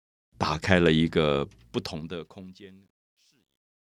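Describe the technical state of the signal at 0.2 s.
At 0.2 s the speech signal is intact, with no fault audible at that moment.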